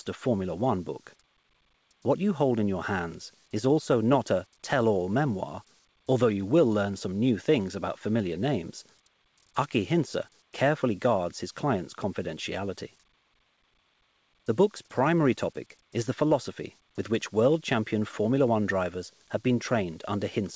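No technical faults are audible anywhere here.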